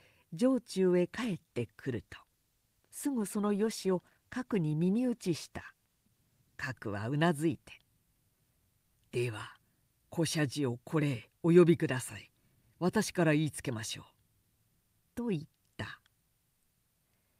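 A call bitrate drop runs from 1.23 to 6.77 s. The bandwidth estimate fell, so the encoder had to code the speech with far fewer bits. The coarser, rougher sound points to a fall from about 48 to 18 kbps, lasting roughly five and a half seconds.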